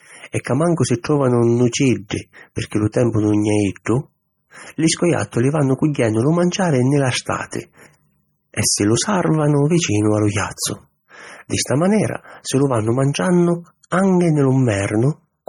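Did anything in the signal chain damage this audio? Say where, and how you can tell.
Yes. Throughout the speech the sound is watery and swirly, the top end is dull, and s sounds chirp metallically while consonant attacks smear. That is heavy MP3 compression at the codec stage, likely a low bitrate around 32 kbps, where the encoder cuts the treble and lets weak frequency lines flicker between frames.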